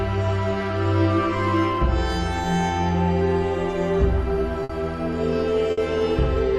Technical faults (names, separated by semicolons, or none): burst of packet loss